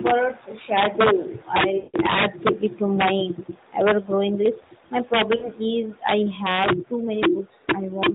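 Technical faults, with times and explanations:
Throughout, integer overflow: peaks driven about 8 dB past full scale wrap to the opposite sign instead of limiting, so a small share of loud samples crack violently.
1.78 to 1.97 s and 5.36 to 5.49 s, lost AMR speech frames: the decoder repeats the last pitch and vocal-tract settings with falling gain. The 160 ms gap, which fits eight 20 ms frames, smears and fades toward silence. The 60 ms gap is briefly drawn out and fading.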